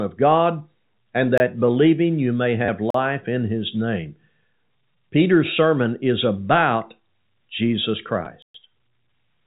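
Speech over a telephone-band path with three blocks of digital silence and two bursts of packet loss with the last packet repeated. The silences fall at 1.38–1.40 s (about 24 ms, just before "believing you may"), 2.90–2.94 s (40 ms, just before "in his name") and 8.42–8.54 s (120 ms). Each is a hard cut to silence, likely from an output buffer that was not filled in time, and it leaves a short hole in the audio. The repeated-packet faults differ because the gap is filled instead of emptied. At 2.65–2.68 s, right after "believing you may", 30 ms of audio is replaced by looping the last received chunk, which fits three lost 10 ms packets. A single 10 ms repeat follows at 8.25 s. The three-packet run gives a brief buzzy, robotic stutter near 100 Hz, and the single repeat a small blip, rather than a silent dropout. The narrow bandwidth, with nothing above 4 kHz, comes from G.711 A-law telephone coding, which adds at most faint damage here.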